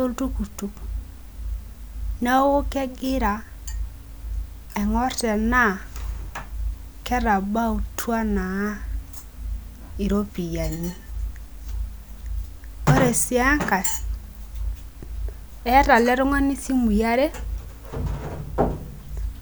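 No technical faults are audible.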